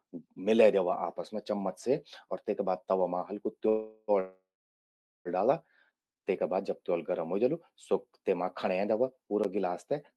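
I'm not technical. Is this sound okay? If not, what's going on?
No. The speech stalls at 3.69–4.11 s and 4.2–5.28 s, fading to silence in the second, then picks up where it stopped. This is a call audio freeze, likely from delayed network packets.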